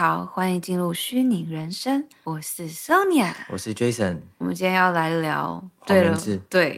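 Speech runs with a faintly unsteady tempo, small hiccups turning up at uneven intervals from about 0.21 s to 6.57 s, as if the talker momentarily stumbles. These are repeated timing corrections. The receiver keeps repeating short slivers of audio to stay in step with the incoming stream, each edit tiny but all pushing the same way. Together they stretch the passage to about 98% speed and add roughly a tenth of a second overall. The cause is clock drift between sender and receiver. The sender's audio clock runs about 2% slower than the receiver's, so the jitter buffer steadily drains rather than holding a stable level. To avoid running dry, the receiver patches in repeated fragments, and because the mismatch persists across the whole clip, those corrections recur throughout rather than clustering in one spot.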